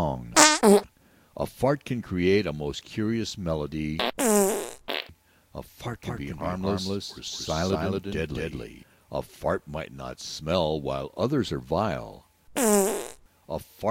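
An everyday sound recording with a doubled audio track from 6.03 to 8.83 s: a second full-band copy at roughly equal level trails about a fifth of a second behind, likely from a slower capture path or a misaligned edit. The waveform shows every transient repeated, and the spectrogram shows ghost images, both starting and stopping abruptly.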